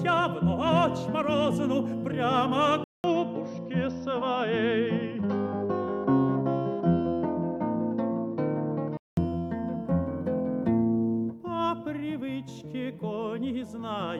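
Input switched to a poorer device, 2.84 to 9.17 s: after a 200 ms gap, sound dulls with nothing above 5.9 kHz, likely another microphone.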